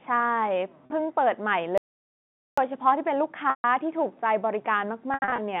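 Telephone-band speech, carried over G.711 A-law with nothing heard above about 3.6 kHz, is broken up by packet loss with pitch repetition at 0.86 s, 3.50 to 3.64 s and 5.14 to 5.38 s. In each gap the receiver loops the last pitch period and fades it out. The 40 ms gap sounds like a briefly held buzz, and the longer gaps sink toward silence. An audio dropout to silence from 1.78 to 2.58 s leaves about 0.8 s of silence with no room tone, likely from a lost input link or a stray mute.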